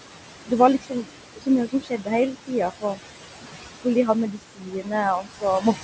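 Noise suppressor artifacts run through the whole clip. The suppressor estimates the steady room noise, which sits about 10 dB below the speech, and pulls those bands down by about 17 dB, frame by frame. The background therefore sinks in the gaps and swells back under each phrase. Because the processing is continuous, this pumping texture is present from start to finish.

Speech cut by the noise suppressor occurs six times: 0.22–0.52 s, 0.82–1.48 s, 1.68–2.08 s, 2.71–2.99 s, 4.32–4.92 s and 5.21–5.44 s. In each stretch the suppressor mistook quiet parts of the speech for noise and turned them down with the background, by about 16 to 19 dB at worst. The affected portions are brief, from around a tenth of a second to under half a second, so soft consonants and word tails sound swallowed or faint.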